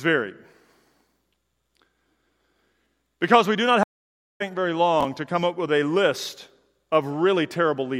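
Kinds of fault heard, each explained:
stream reconnect: The connection dropped and the player restarted with a fresh decoder partway through the stream. Just after "we do not", at 3.83 s, the speech cuts to silence. The gap lasts about 0.57 s, until 4.42 s. Playback then resumes at a later point, roughly 0.3 s further on, so that stretch of speech is simply missing. The first moment after the gap comes in muted or faded.
chunks out of order: One short block of audio was delivered or written late, so it plays after material that should follow it. Here a 20 ms chunk sits one chunk out of place, between 5.01 and 5.05 s, just before "to come up with". Nothing is lost, but the sequence is scrambled. Three hard joins create a brief jumbled flicker.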